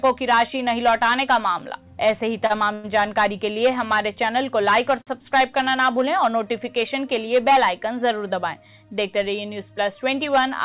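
The audio has passed through a narrowband call path with nothing above 4 kHz, consistent with G.711 mu-law at 64 kbps. It shows three short stalls from late packets, at 2.46–2.52 s, 2.74–2.86 s and 5.02–5.09 s. In each, the jitter buffer ran dry and the receiver held the last sound for about 32, 100 and 51 ms respectively, then resumed from the same point, so nothing is lost but the sound briefly hangs. From 10.29 to 10.60 s a jitter buffer speed-up plays the audio at about 111% speed without changing pitch. The receiver trimmed short pitch-period pieces, roughly 40 ms in total, to drain excess buffered delay, which gives that stretch a hurried feel.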